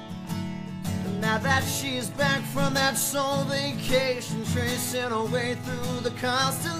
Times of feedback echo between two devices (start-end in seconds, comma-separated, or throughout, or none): none